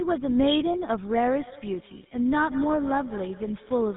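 From the start, tandem speech coding runs the speech through GSM full rate twice, G.711 between. Roughness and warble compound; the spectrogram stops dead at 3.8 kHz.

From 1.39 s onward, feedback echo between two devices repeats each word roughly every fifth of a second, about 18 dB down, as faint trailing copies on the waveform.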